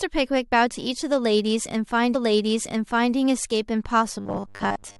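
A speech clip with two faults. From 2.14 to 3.14 s a stream segment is repeated, replaying about one second of audio after a small blip at the jump back. A spectrogram shows the same block of patterns twice in a row. From 4.2 s to the end the sound turns into a rigid, metallic robotic buzz at a fixed 100 Hz. This likely comes from repeated short buffers, with each 10 ms chunk looping while most of the real audio is skipped. It shows as evenly spaced horizontal harmonic lines and a largely periodic waveform.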